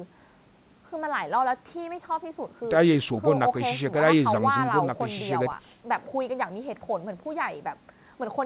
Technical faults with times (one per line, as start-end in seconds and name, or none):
none